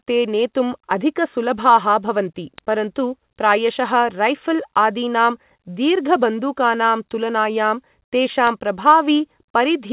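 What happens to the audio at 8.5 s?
A single sharp, broadband tick lands at 8.47 s: a bit error spike, where a flipped bit knocked about three consecutive samples far off before they snapped back.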